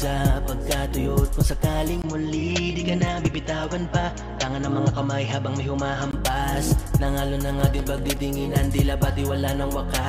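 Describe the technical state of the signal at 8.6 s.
CD scratch ticks are present here, within a run lasting from 7.23 to 8.73 s. A blemish on the disc corrupts more data than error correction can rebuild, so on each turn of the disc the player interpolates or mutes the bad samples. The result is brief ticks, the longest only a few milliseconds, repeating at about six per second. That steady, rotation-linked rhythm separates them from the randomly spaced clicks of dust on vinyl.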